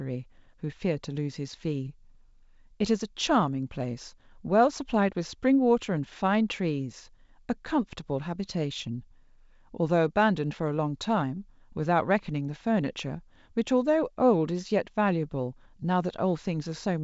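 No technical faults are audible.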